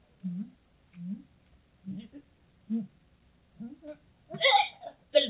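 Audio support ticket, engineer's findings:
No faults found; the sound reaches the listener over the WebRTC call path, with nothing above 4 kHz, consistent with narrowband G.711 A-law coding.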